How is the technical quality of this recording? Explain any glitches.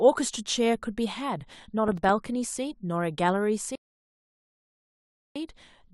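Two glitches mar this speech recording, a short crackle and a long stall.

From 1.88 to 2.09 s there is processor overload crackle. The processor misses several buffer deadlines of roughly 3 ms in a row, and each miss drops to silence, producing a brief gritty tearing.

At 3.75 s a rebuffering stall cuts the audio to silence. The player has run out of downloaded data, and it resumes at 5.36 s exactly where it stopped, adding 1.60 s.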